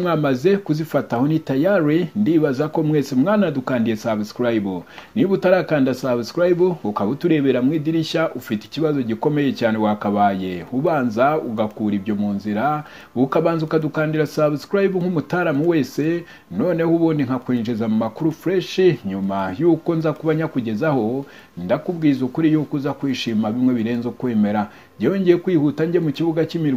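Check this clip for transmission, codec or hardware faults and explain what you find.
Listening closely, nothing in the audio stood out as a problem.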